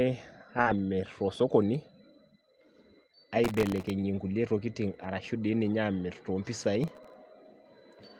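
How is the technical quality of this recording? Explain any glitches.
The recording has three kinds of glitch: a brief concealed dropout, rough patches rebuilt from error correction, and two bursts of crackle. The speech has passed through an Opus call path. Its highs stop near 12 kHz, as that codec setting would give.

Short concealed packet loss occurs from 0.61 to 0.68 s. About 40 ms of audio never arrived in time. The decoder covered the hole by extending the last sound, then blended back into the real signal. It is heard as a quick smear or wobble. A short consonant there may be lost entirely.

Lost packets rebuilt from error correction follow at 0.66 to 0.80 s, and again at 4.28 to 4.46 s. These spans, 80 ms and 100 ms, fit four and five lost packets. Each lost packet was replaced by a low-bitrate copy carried in the next one. There is no gap. The rebuilt stretches sound rougher and noisier, though, like a brief drop to poorer coding.

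Processor overload crackle appears from 3.44 to 3.90 s and from 6.84 to 7.14 s. The processor kept missing deadlines for its tiny buffers, each well under a millisecond. Each miss replayed a fragment of old audio with hard edges. The first burst holds dozens of misses, the second perhaps a dozen or so. Together they form a gritty, tearing crackle over the sound that stops once the load eases.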